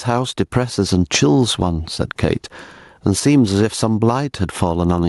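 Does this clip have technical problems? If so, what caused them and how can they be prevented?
Yes. The speech has gain pumping throughout. The gain swings by about 15 dB. Loud and soft parts sit unnaturally close together, so the sound feels squashed. The likely cause is input gain set far too high, with a fast limiter or compressor clamping down on every peak. To prevent it, lower the input gain and use gentler, slower compression.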